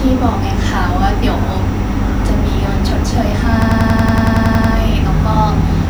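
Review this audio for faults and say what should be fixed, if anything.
From 3.62 to 4.74 s the speech breaks into a rapid machine-gun stutter: one 93 ms fragment repeats 12 times at about 10.8 Hz. This is a system hang loop. The driver stalled while the hardware kept replaying its ring buffer, which fits a 4096-sample buffer. Little or no audio appears lost. To prevent it, keep the audio thread from blocking and have the driver detect a stalled buffer and output silence instead of recycling stale data.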